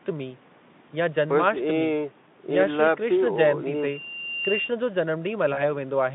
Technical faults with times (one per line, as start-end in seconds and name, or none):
5.53-5.60 VoIP packet loss concealed by the speech codec